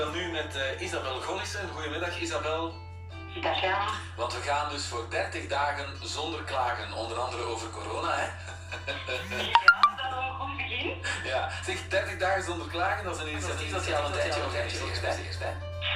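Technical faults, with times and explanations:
13.34 s to the end, doubled audio track: from 13.34 s a second full-band copy of the sound runs alongside the first, trailing by roughly 400 ms and about 5 dB quieter. It was likely picked up again by a slower path, or an edit left two copies out of step. Unlike a room echo or reverb, the copy has no decay, no repeats and no added room colour, and it switches on abruptly rather than building up.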